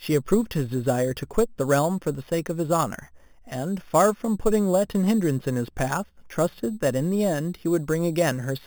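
A bright, metallic fizz rides on the speech from start to finish, swelling and fading with the talker's level and sitting about 18 dB below it. This is imaging from sample-and-hold upsampling. Each original sample was simply repeated to reach the higher rate, with no smoothing filter, so mirror copies of the spectrum remain. The lowest copy fills roughly 4 to 8 kHz, which fits an original rate of 8 kHz.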